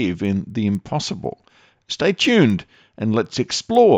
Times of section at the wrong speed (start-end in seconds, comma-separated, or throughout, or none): none